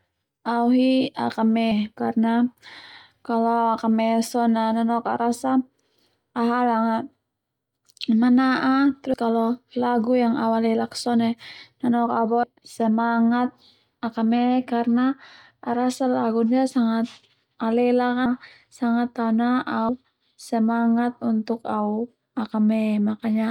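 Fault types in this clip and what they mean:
Compressed frames skipped: Whole blocks of coded audio never reach the output, so the speech jumps forward at 1.71, 9.14, 12.43, 18.26 and 19.89 s, losing roughly a sixth to a third of a second each time; the jump sizes fit a 32 ms frame. On a waveform the envelope splices abruptly; a spectrogram shows harmonics and formants cutting over discontinuously.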